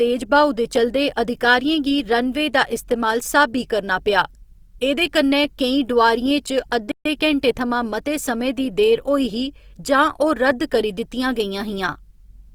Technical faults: Opus compression; playback stall

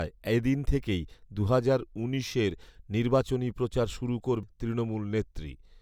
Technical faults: CD skip

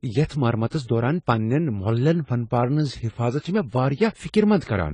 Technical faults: AAC compression

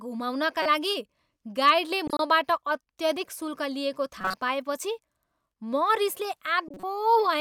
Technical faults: corrupt frame decoded

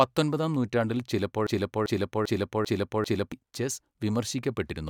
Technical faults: broken-record loop

